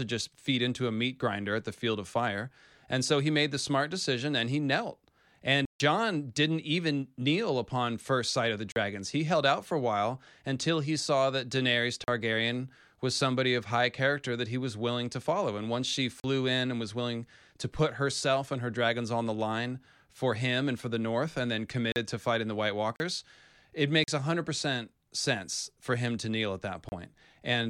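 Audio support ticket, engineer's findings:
Block of digital silence at 5.65–5.80 s (about 147 ms), 8.72, 12.04, 16.20, 21.92, 22.96, 24.04 and 26.89 s (30–40 ms). Likely output buffer not filled in time, samples zeroed, hard cut at each edge of speech.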